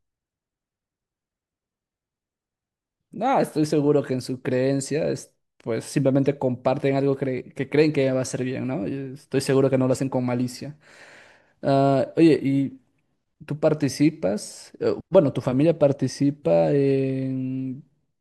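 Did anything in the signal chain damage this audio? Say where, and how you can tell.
No, nothing in the signal chain has damaged this speech recording. Listening through it, I hear no point where any stage has altered the sound.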